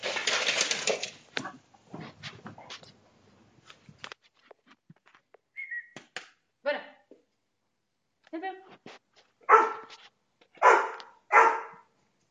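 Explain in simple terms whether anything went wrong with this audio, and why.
Two devices were likely running on slightly mismatched clocks, so a tiny block of samples was regularly dropped or repeated to keep up. These clock drift buffer slips are heard as a steady click about every 1.88 s, from 1.82 s to 11.2 s.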